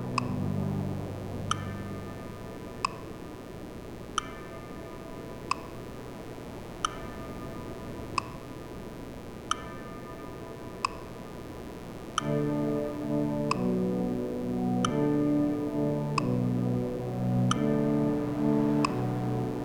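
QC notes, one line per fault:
Throughout, mains buzz: a steady, raspy buzz on a 60 Hz mains supply sits about 15 dB below the wanted sound. Sharp switching spikes enter twice per mains cycle, so the rasp repeats 120 times a second, and their edges spread energy into a dense comb of 60 Hz harmonics reaching several kHz. A spectrogram shows evenly spaced horizontal lines running the full length of the clip. The waveform carries a regular spiky ripple under the signal.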